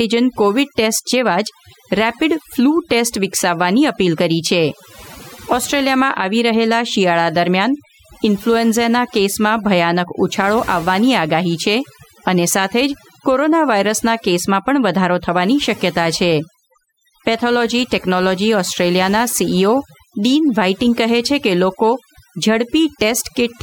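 A noise reduction stage was set far too aggressively, causing overdone noise removal that runs through the whole speech recording. Wherever a frequency band came close to the processor's estimate of the noise floor, that band was pulled down hard or switched off entirely, taking softer parts of the voice with it. The background drops and breaks up into twinkling, warbling specks.

At 2.92 s, a block of digital silence appears: a short run of samples was output as silence, with no fade in or out. The gap lasts about 0.73 ms, which fits a dropout of 32 samples. Because the waveform jumps abruptly to zero and back, each edge produces a discontinuity, and at this tiny length the two merge into a single brief tick rather than an audible hole.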